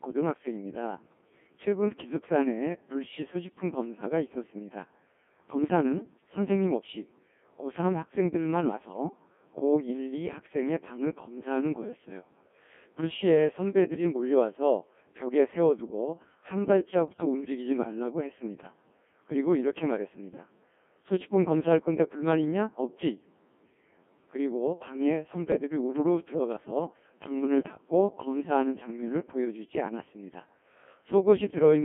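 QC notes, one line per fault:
Throughout: Codec 2 vocoder. The speech has been reduced to a very low-rate parametric stream, around 1.6 kbit/s, carrying only pitch, voicing, energy and a spectral envelope, and the decoder rebuilds it from sine waves rather than the original waveform. That is why the voice sounds robotic and buzzy, with heavy codec damage, and it sits inside a narrow line band of roughly 200 Hz to 3.4 kHz, so lows and highs are gone.
17.08 to 17.25 s and 27.60 to 27.82 s: bit errors on digital voice radio. In each burst about four vocoder frames were hit by corrupted bits, about 5% of bits in the first burst and about twice as dense in the second. Because each bit in such a sparse stream steers the pitch, level, voicing or spectrum of a whole frame, the synthetic voice lurches in pitch and loudness and collapses into brief warbles and robotic gibberish, worse at 27.6 s.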